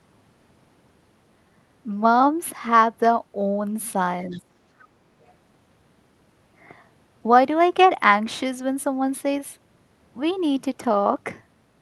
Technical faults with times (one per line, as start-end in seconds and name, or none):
4.31-4.40 other side's voice leaking through
4.36-4.49 speech suppressed in double talk
4.80-4.87 other side's voice leaking through